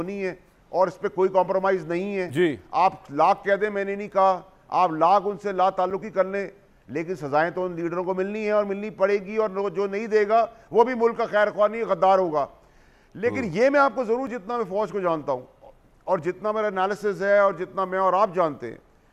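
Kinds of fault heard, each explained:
Block of digital silence: the signal drops abruptly to zeros and returns with no fade, leaving a hole of the kind that most often happens when the output buffer is not filled in time. It occurs twice, at 5.90 s and 14.27 s. The first gap lasts 5.33 ms, which fits a single 256-sample buffer at 48 kHz; the second lasts 3.48 ms. Both are too short to register as a pause, so each is heard as a tick or dip.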